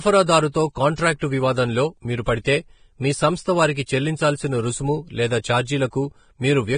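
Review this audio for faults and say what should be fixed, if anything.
The speech is dull and grainy throughout, with nothing above 9.7 kHz and a hiss that rises and falls with the voice. That points to heavy Vorbis compression, likely at a bitrate around 23 kbps, where coarsely quantised treble turns into noise. Unlike steady background hiss, it tracks the signal. To prevent it, encode at a much higher Vorbis quality setting or deliver the audio uncompressed.

Pre-echo appears as brief hiss just before sharp onsets at 0.96 to 0.98 s, 1.19 to 1.22 s just before "వివాదంలో మీరు", 2.44 s before "మీ సంస్థ వారికి చెల్లించాల్సిన", 3.86 s, and 5.42 to 5.44 s after "వారికి చెల్లించాల్సిన రుసుము లేదా". Each lasts 14 to 27 ms. Unlike reverb, it comes before the attack. To prevent it, use a higher bitrate and an encoder that switches to short blocks at transients.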